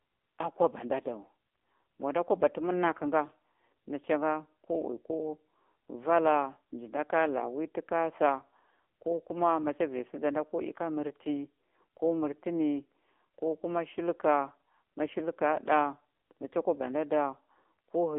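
From start to finish the speech has the AMR narrowband mobile codec on it, and the damage is plain. The band sits roughly between 250 Hz and 3.6 kHz, so it's thin and boxy with no air on top. The codec rebuilds the voice from a vocal-tract model fed by sparse pulses, and here that comes out buzzy and synthetic, which fits one of the lower modes, around 7.4 kbps.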